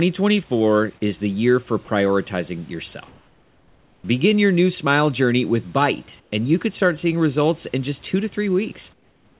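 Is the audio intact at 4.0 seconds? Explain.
No. From 3.08 to 4.04 s the room background gives way to a steady, featureless hiss about 4 dB quieter. This is comfort noise in place of the background, likely because discontinuous transmission stopped sending audio during the pause and the receiver synthesised noise shaped roughly like the room.

At 4.02 s the returning speech starts abruptly, its soft beginning missing. This is an onset clipped by the voice detector: the detector was likely slow to register the restart, so about 20 ms went unsent and was filled with that same synthetic noise.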